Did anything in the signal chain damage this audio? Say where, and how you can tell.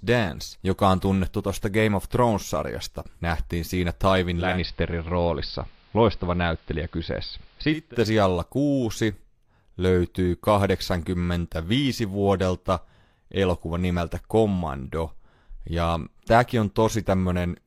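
Yes, at the reception stage, in the hybrid radio itself: digital radio blending to analogue between 4.33 and 7.96 s. Over a crossfade of about 0.3 s the speech moves onto the AM broadcast of the same station. Hiss rises to roughly 35 dB below the speech, and the level shifts by about 2 dB. The receiver lost the digital signal, fell back to AM, and then blended back to digital.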